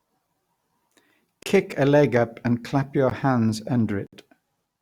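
Three times, runs of output samples were replaced by zeros, leaving blocks of digital silence in the speech: 1.43 to 1.46 s (about 32 ms), at 3.10 s (about 15 ms), and 4.07 to 4.13 s (60 ms). Each time the sound cuts out and back with no fade, so the shortest gap ticks and the others open audible holes.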